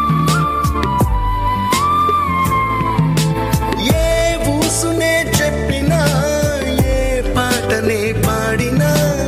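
Nothing in the audio stood out as a technical fault on listening.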